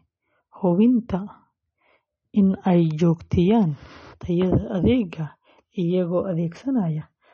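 Throughout, the speech sounds watery and swirly, with nothing above 8.2 kHz. The likely cause is MP3 compression, fitting a bitrate around 32 kbps.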